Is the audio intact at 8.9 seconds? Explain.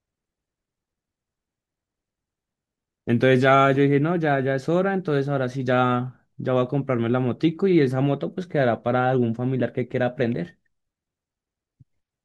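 Yes, the speech at 8.9 seconds comes through intact, with no audible fault at that point.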